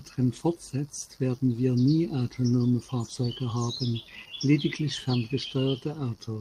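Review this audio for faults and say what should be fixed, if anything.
No faults turn up in this speech recording, so nothing needs to be fixed.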